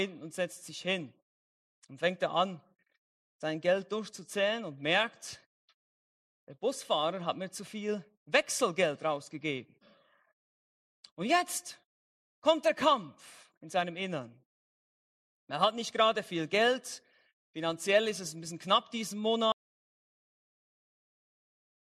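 At 19.52 s the audio cuts out abruptly and stays silent, without even room tone, through the end: an audio dropout to silence, most likely from a lost input or accidental mute.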